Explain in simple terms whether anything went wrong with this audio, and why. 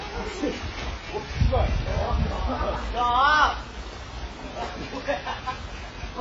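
AAC compression, throughout the clip: everything above 7.6 kHz is gone, leaving the sound dull and smeared, likely from heavy squeezing into a small file.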